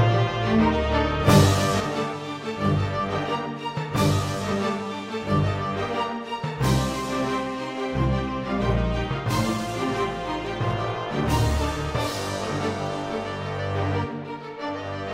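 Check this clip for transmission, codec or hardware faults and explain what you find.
One fault is present. From 1.80 s onward, the level falls abruptly by about 6 dB, likely one channel drops out before the mono sum.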